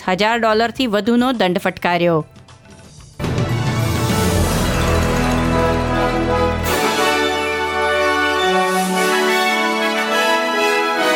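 Nothing in the recording stood out as a technical fault on listening.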